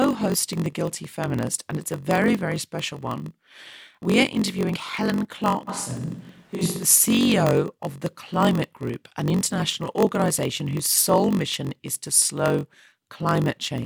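Block size mismatch (padded), throughout: shorter blocks are zero-filled to fit a 1024-sample read, leaving a 46.9 Hz buzz and speech running at 0.938 speed.

Switch to a distant microphone, 5.70 to 6.82 s: the speech abruptly turns roomy and hollow at a similar level, with noise about 30 dB below, likely from a farther microphone replacing the close one.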